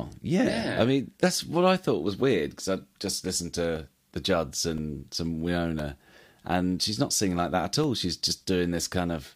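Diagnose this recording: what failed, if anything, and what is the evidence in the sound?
Regular small ticks start at 3.76 s, just after "because I just listened", and repeat every 1.02 s through 8.86 s, each a brief hole of a couple of milliseconds filled with silence. This is periodic USB or driver dropouts, failing at the driver or buffer stage: something stalls the USB bus or audio driver on a fixed schedule, so a sliver of samples never arrives and gets zeroed, producing clicks against the speech.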